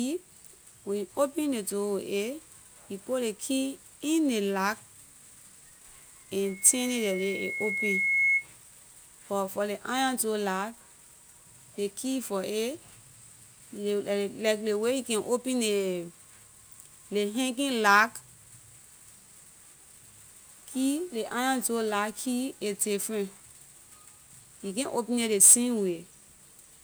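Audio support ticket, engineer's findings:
Loudspeaker feedback squeal, 6.44 to 8.47 s. Single 2.2 kHz tone swelling over about two seconds, peaking roughly 5 dB above the speech. Mic catching its own PA, loop gain over unity at that frequency. Check mic placement, notch 2.2 kHz.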